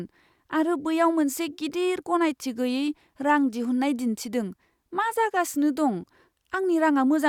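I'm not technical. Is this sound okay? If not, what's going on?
Yes, nothing in this recording shows a technical fault.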